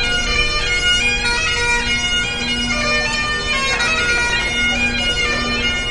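A recording of everyday sounds carries plainly audible watery, swirling codec damage throughout, with nothing above 11.2 kHz. This is likely MP3 compression at a low bitrate, fitting about 48 kbps. Unlike a simple low-pass filter, weak frequency lines flicker on and off between frames. From 4.06 to 4.66 s there are six CD scratch ticks, each a brief tick or tiny dropout of a few milliseconds at most, where the player patched over data its error correction could not rebuild. Their regular spacing, repeating with the disc's rotation, sets them apart from the random clicks of vinyl dust.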